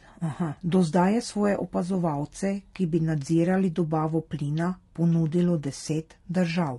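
From start to finish the speech sounds rough and grainy, with noise filling the gaps between the harmonics and a thin, synthetic top end. That's likely low-delay AAC compression: short frames smear pitch detail, and the damage fits a bitrate around 32 kbps.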